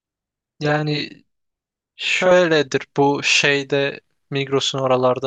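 Speech clip with channel delay (doubling) from 0.00 to 2.31 s: one channel trails by 40 ms, so the mono sum shows each onset twice, 40 ms apart, in waveform and spectrogram.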